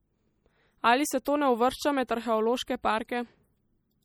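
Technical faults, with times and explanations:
Throughout, MP3 compression: the speech sounds plainly coded, with a watery, swirling quality and smeared consonants. At around 48 kbps the encoder likely ran short of bits. It cut the treble and dropped weak frequency lines, which flicker between frames.
1.25 s and 2.07 s, pre-echo: a brief hiss comes just before each attack, once ahead of "to ne uvršča" and once after "se to ne uvršča". The noise spreads over about 14 and 16 ms. The codec smears quantisation noise across the block, so the attack sounds softened.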